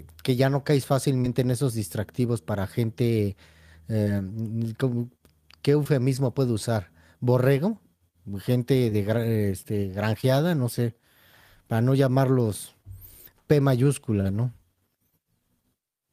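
Short concealed packet loss occurs in this speech clip at 1.21–1.26, 4.04–4.08, 5.84–5.87, 8.89–8.93, 10.21–10.25 and 14.21–14.27 s. In each, about 20 ms of audio (40 ms in the last) arrived too late to decode. The receiver filled the gap by extending the preceding sound, pitched or noise-like, and then blended back, so each event is a brief smear or wobble. The 14.21 s gap is the longest.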